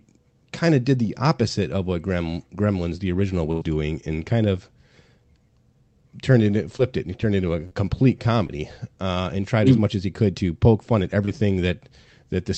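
At 3.51 s to 3.63 s there is a burst of packet loss: about 100 ms of the speech never arrived, and the receiver spent roughly 94 ms extending the last sound while turning it down before real audio resumed further on. It sounds like a brief held, fading tail followed by a skip. On a spectrogram the harmonics or noise freeze into flat horizontal streaks that dim across the gap, then the pattern jumps abruptly. In the waveform the envelope decays smoothly instead of following the speech.

Short concealed packet loss occurs at 6.77 to 6.81 s, 7.67 to 7.73 s, 8.47 to 8.51 s and 11.25 to 11.29 s. Each time, a few hundredths of a second went missing: about 20 ms at three points and 40 ms at 7.67 s. The decoder patched each hole with a continuation of the preceding sound, about 18 to 42 ms of it, then crossfaded back. These are heard as quick smears or wobbles. On a spectrogram each shows as a thin vertical band where detail briefly repeats or blurs, and in the waveform as a short, slightly too-regular stretch.

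All of this passes through an Opus call path at 32 kbps whose spectrum stops at 8 kHz.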